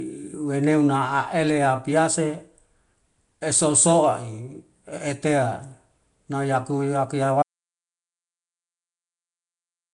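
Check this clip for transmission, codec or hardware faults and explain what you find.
Two faults are present. Codec damage runs through the whole clip, and the sound drops out near the end.

Throughout the speech there is a rough, hissy halo and a smeared, underwater quality, with nothing above about 10.6 kHz. That points to Nellymoser compression as the likely cause, at a rate near 44 kbps. The codec spends only two bits a sample on each block. Weak bands get no bits and are filled with noise.

At 7.43 s an audio dropout to silence begins and lasts to the end. The input was likely lost, and silence was written in its place. The gap is total silence, with no room tone.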